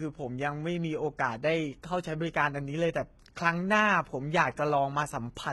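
Throughout the speech, sibilants sound gritty and lispy over a bright but unnatural treble, likely from heavy HE-AAC compression rebuilding highs by band replication, fitting roughly 16 kbps.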